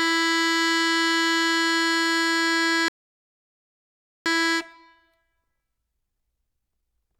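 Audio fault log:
2.88–4.26 s, rebuffering stall: the music drops to silence for about 1.4 s while the player waits for data, then picks up exactly where it left off.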